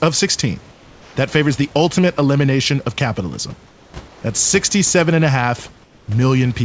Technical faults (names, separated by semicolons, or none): comfort noise in place of the background